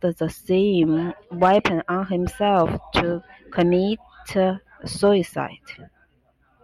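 Hard clipping hits the speech four times: 1.43 to 1.66 s, 2.47 to 2.99 s, 3.59 s and 5.05 s. Peaks exceed what a stage can pass, by about 1 to 3 dB, and get cut flat. Those flattened tops add high harmonics, heard as brief crackle on loud moments.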